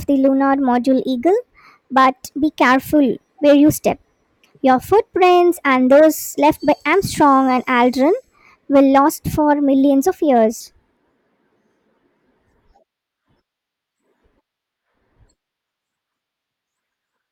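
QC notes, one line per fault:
0.00–10.60 s, section at the wrong speed: speech plays 1.17 times fast, about three semitones high and hurried, likely from a clock mismatch in playback or editing. Spectrogram harmonics and formants sit raised, stepping down at 10.60 s; waveform syllables look squeezed in time.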